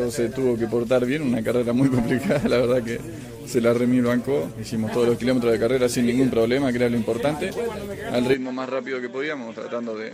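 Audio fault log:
8.34–10.13 s input switched to a poorer device: abruptly duller and about 5 dB quieter, nothing above 7.7 kHz, faint new background noise, no gap; likely another microphone took over.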